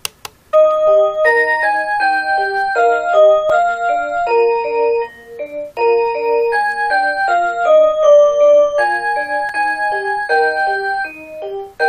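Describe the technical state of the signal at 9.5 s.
At 9.49 s there is a gap between stream segments: a hard-edged hole of about 3.6 ms where two 6.0 s segments fail to meet, filled with silence. Unlike a dropout, nothing is missing; the sound resumes exactly where it paused, only delayed.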